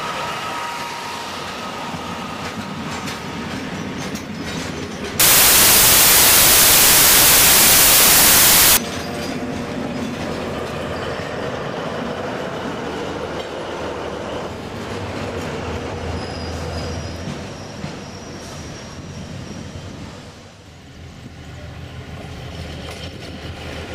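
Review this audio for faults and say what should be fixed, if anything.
From 5.20 to 8.77 s there's a wrong sample width fault: loud noise with the real sound buried underneath, slowed to 0.667 times speed and pitch, which fits 24-bit packed samples being read as 16-bit and mashing neighbouring bytes together. Check the reader's sample format matches the writer's.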